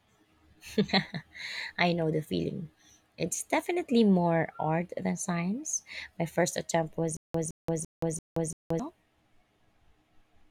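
From 7.17 to 8.79 s, just after "first attempt was", there is a stutter with silent gaps: a 164 ms burst of speech repeats five times, each followed by about 176 ms of digital silence, giving an even 340 ms rhythm. The likely cause is a stalled stream replaying its last buffered fragment at each retry, so the intended audio there is lost. On a waveform it appears as identical blocks separated by flat silent gaps; a spectrogram shows matching repeated patches divided by fully blank columns.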